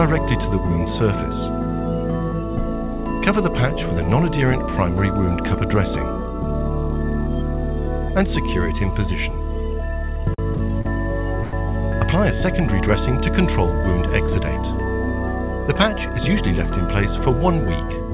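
Between 10.34 and 10.87 s the sound stutters in repeated stalls. Packets arrived late, so the jitter buffer ran dry four times. Each gap was filled by continuing the last sound, about 109 ms in all, the longest 42 ms. Nothing is lost, but the audio drags.

At 11.43 s a short stall from a late packet follows. The packet arrived 98 ms late, and the buffer emptied. The receiver held the last sound for 98 ms, then resumed where it stopped. One sound lingers too long.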